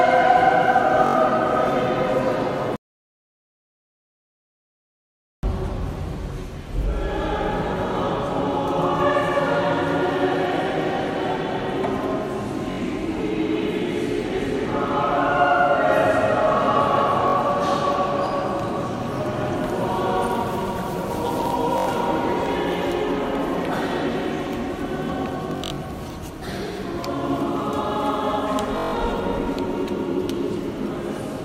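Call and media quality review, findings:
Bluetooth stutter at 1.07–1.16, 12.71–12.79, 17.28–17.36, 21.78–21.88, 25.51–25.78 and 28.78–28.94 s. Short buzzing repeats. Receiver replays its last buffer while packets are late or lost, about 64 to 192 ms each. Sound resumes further on.

Audio dropout to silence, 2.76–5.43 s. About 2.7 s of silence, with no room tone. Input likely disconnected or muted while the recorder kept writing silence. Content in the gap is lost. Cut is abrupt on both sides.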